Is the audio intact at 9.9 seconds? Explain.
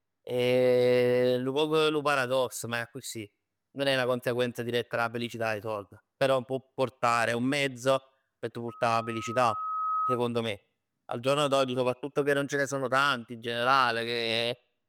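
No, there's a loudspeaker feedback squeal from 8.68 to 10.21 s, right after "un mezzo p' t'": a 1.3 kHz loop tone swelling over about a second and a half to roughly speech level.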